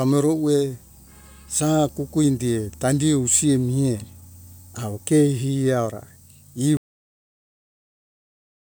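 At 6.77 s the speech hits a cut-off end: the final buffers were never written, so the sound stops mid-utterance and drops straight to digital silence without decay.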